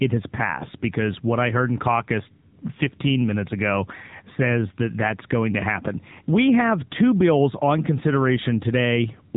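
From start to finish the speech carries the sound of the AMR narrowband mobile codec (AMR-NB). Nothing above 3.8 kHz remains, so a spectrogram shows an empty band over that line for the whole clip. The codec rebuilds speech from a vocal tract model and a few excitation pulses, and the synthetic colouring is plainly audible, which fits a low mode of about 7.4 kbps.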